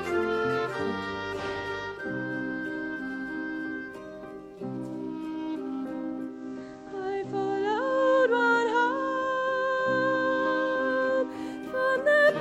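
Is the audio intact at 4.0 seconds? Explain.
Yes, at 4.0 seconds the audio is intact, with nothing breaking up, dropping out or distorting at that point.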